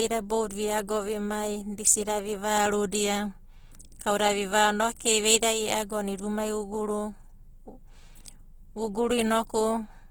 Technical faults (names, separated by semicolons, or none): Opus compression